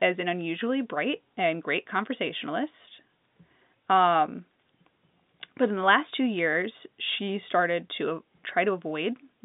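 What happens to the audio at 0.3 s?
Nothing goes wrong at 0.3 s: the speech there is intact, carried on the usual narrow telephone band of G.711 coding with no dropout, click or distortion at that moment.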